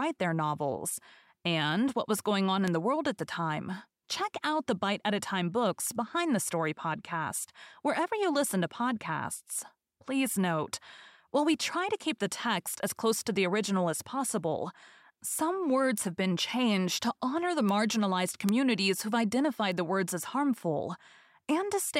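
Flipped bits in memory or on a digital link knock a few samples off by a power of two before they snap back. The result is six bit error spikes at 2.68, 5.83, 15.98, 17.69, 18.49 and 19.72 s. Each is a sharp broadband tick, about -27 to -9 dBFS, unrelated to the speech.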